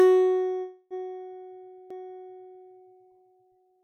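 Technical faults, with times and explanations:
0.61 to 1.00 s, call audio freeze: the music stalls into a fading buzz-like continuation of the last sound for about 292 ms, then resumes exactly where it stopped. Nothing is lost but everything after arrives 292 ms later, likely because delayed packets emptied the jitter buffer.
1.90 s, CD skip: a tick and a near-instant mute of only a few milliseconds, after which the music carries on from a different point. The laser has jumped to another turn of the disc's spiral, so playback lands elsewhere in the track.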